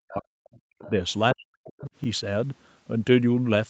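A speech recording that, from 0.00 to 0.94 s and again from 1.35 to 1.90 s, dips by up to about 40 dB and breaks up, likely speech suppressed in double talk by an echo canceller ducking both sides. Short stretches of the other side's voice leaking through appear at 0.53 to 0.58 s at about 35 dB below the speech, at 0.79 to 0.90 s at about 20 dB below, and at 1.81 to 1.90 s at about 25 dB below, likely residual loudspeaker echo left in the microphone signal. At 2.04 to 2.06 s a repeated buffer plays a 20 ms block twice, producing a brief stutter with a hard join. Nothing is heard above 8 kHz, consistent with the Opus call path's bandwidth.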